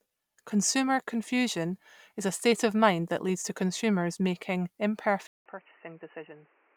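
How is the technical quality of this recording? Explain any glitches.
At 5.27 s, right after "leads to consumers making", the speech cuts out for 187 ms, then returns dull and boxy to the end: nothing above 3 kHz, around 10 dB quieter, with a new noise floor roughly 30 dB below the speech. The likely cause is the input switched to a poorer device, a narrower-band microphone or headset call profile.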